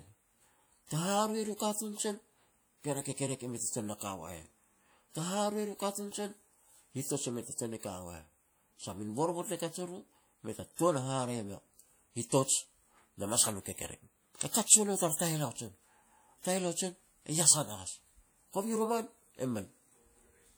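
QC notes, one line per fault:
throughout, WMA compression: the speech rings and sounds washy, with a hiss that swells and fades with each phrase and smears across tens of milliseconds instead of staying tied to the sound. The high end stays open to about 20.1 kHz, so the damage comes from coarse quantisation, with weak detail dropped, rather than band-limiting. The likely cause is an early WMA encoder with long transform blocks, and the plainly audible damage fits a bitrate around 48 kbps.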